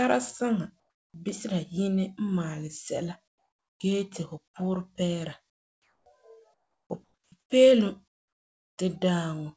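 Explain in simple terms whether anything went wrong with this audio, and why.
Comfort noise in place of the background: in the pauses at 0.80–1.14, 3.28–3.80, 5.50–6.06, 6.54–6.90, 7.04–7.32, 7.40–7.50 and 8.08–8.78 s, the real room sound gives way to a flat, slightly quieter hiss, much quieter at 8.08 s. The call likely stopped sending during silence, and the receiver filled the gaps with synthetic noise.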